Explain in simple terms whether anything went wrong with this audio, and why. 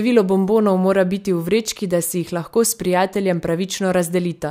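Nothing went wrong with this audio; the speech comes through without any fault to point to.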